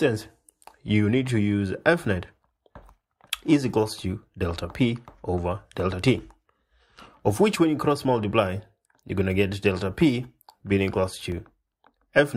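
A block of digital silence falls at 7.53 s and again at 11.32 s: the output buffer went unfilled and zeros replaced the sound for 5.3 ms, then 2.7 ms, lengths that point to 256- and 128-sample blocks. The abrupt cut and return make each gap a sharp tick.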